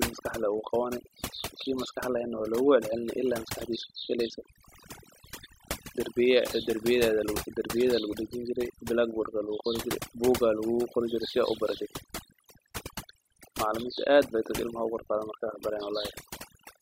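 A speech recording with overdone noise removal from start to finish. Heavy suppression strips quiet frequency bands, leaving near-silent gaps with twinkling specks.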